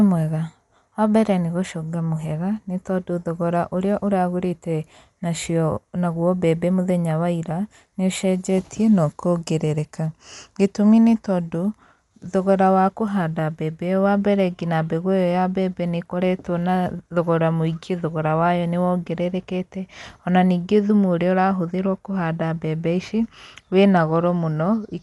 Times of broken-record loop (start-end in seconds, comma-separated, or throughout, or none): none